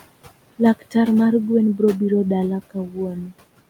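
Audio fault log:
throughout: noise suppressor artifacts. The room noise sits about 18 dB below the speech, and the suppressor pulls it down by about 18 dB frame by frame, so the background dips between words and rises under them.
2.71–2.97 s and 3.14–3.33 s: speech cut by the noise suppressor. After "mar gwen brobiro dala", quiet speech is mistaken for noise and dropped by up to about 14 dB and about 10 dB, sounding swallowed for roughly a tenth of a second and roughly 150 ms.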